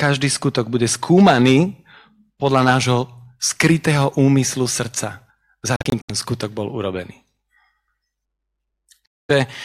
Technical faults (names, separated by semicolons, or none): Bluetooth dropout